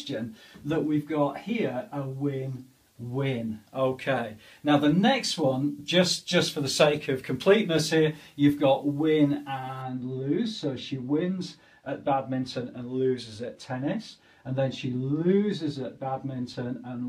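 De-emphasis is applied wrongly from 9.82 s onward: a treble cut slopes the response down to about 14 dB lower at 10 kHz, leaving the sound dull and muffled.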